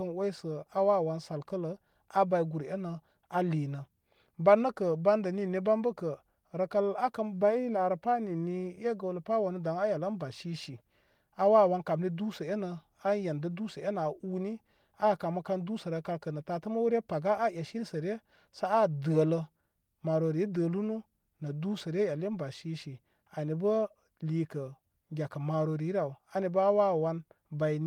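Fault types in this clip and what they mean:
No faults detected.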